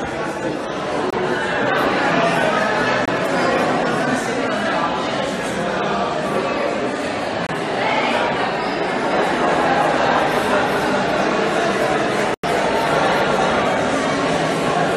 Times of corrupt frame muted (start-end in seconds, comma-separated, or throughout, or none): 1.10-1.15, 3.05-3.09, 7.47-7.55, 12.34-12.45